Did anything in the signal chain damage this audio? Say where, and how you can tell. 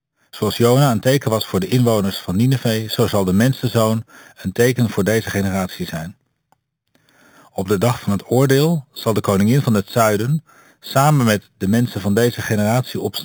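Yes. A bright, metallic fizz sits on the speech throughout, rising and falling with it, about 17 dB below the signal. This is imaging from sample-and-hold upsampling at the rate-conversion stage: 8 kHz audio raised to 48 kHz by repeating samples without filtering, mirroring the spectrum into the 4 to 8 kHz band and above.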